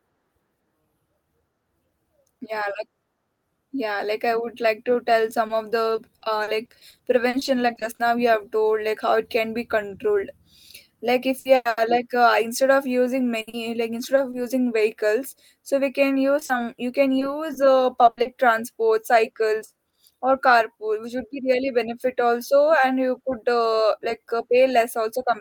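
Repeated packet loss (robotic sound) hits 5.47–8.01 s, 11.39–11.79 s, 13.41–14.35 s and 16.39–18.27 s: dropped packets, patched by extending prior audio, cause choppy speech with pieces missing.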